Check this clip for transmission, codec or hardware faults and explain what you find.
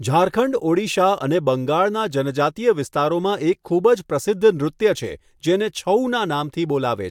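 Nothing in the recording points to a fault anywhere along its path. There is nothing to report or explain.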